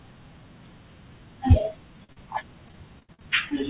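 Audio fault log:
2.04–3.51 s, repeated packet loss (robotic sound): the speech turns choppy, with small pieces dropping out over and over through this last stretch. Packets kept going missing or arriving late, eleven holes in all, the longest about 59 ms. Each one was filled by stretching the sound that came just before it, so roughly 270 ms of the span is patched-over repetition, close to a fifth of it. That is where the buzzy, robotic texture comes from, heard through a call path with nothing above 4 kHz that fits a G.711 A-law codec.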